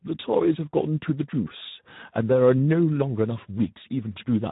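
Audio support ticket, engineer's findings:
Speex codec throughout: hoarse, noisy speech; spectrogram shows nothing above 3.8 kHz and smeared harmonics. Thin CELP excitation, fits roughly 11 kbps.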